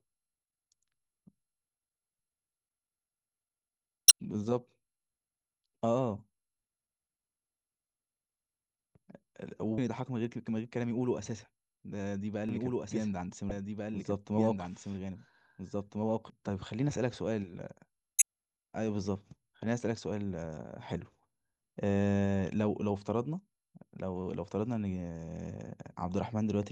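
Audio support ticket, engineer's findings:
Compressed stream damaged: short decoding glitches at 4.08–4.11 s, 9.75–9.78 s, 13.48–13.51 s and 18.18–18.22 s, each roughly 35 ms. Component: decoder input. Corrupt frames make the decoder lose sync and hunt for the next header, dropping material. Spectrogram: brief broadband vertical smear or garbled block with a discontinuity at each edge. Waveform: abrupt spike or splice, no smooth envelope.

Doubled audio track: 12.49–16.30 s, the speech is heard a second time about 1.5 s behind, the copy about 5 dB down, full-band, dry, no reverb tail, cutting in and out abruptly. Likely cause: a second, slower capture path or an edit leaving two offset copies mixed. Spectrogram: duplicate formant pattern shifted right by about 1.5 s, hard start and stop. Waveform: overlapping envelopes in that span, sharp boundaries.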